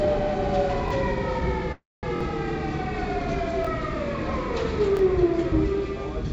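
At 0.88 s the playback device ran short of new audio and replayed its last buffer, a repeated buffer of about 23 ms, which fits a 1024-sample buffer. The same fragment of this everyday sound plays twice with a hard join, heard as a quick click-like stutter.

From 1.72 to 2.05 s, packets were likely held up in transit until the jitter buffer emptied, causing a call audio freeze. The receiver stretches the last sound into a fading buzz that drops to silence for about 210 ms, 310 ms in all. When audio resumes nothing is missing, but everything after runs about 310 ms late.

Further buffer underruns repeat a buffer at 2.16 s (two extra plays, a slightly longer stutter of about 50 ms), 3.65 s and 4.97 s. All of this passes through the G.722 call codec at 64 kbps, which leaves nothing above 8 kHz.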